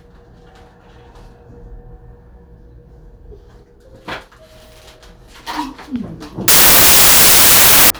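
A short clip of everyday sounds where, from 6.48 to 7.90 s, a wrong sample width turns it into loud noise: packed 24-bit data read as 16-bit, so it crawls along at two-thirds speed, pitched down.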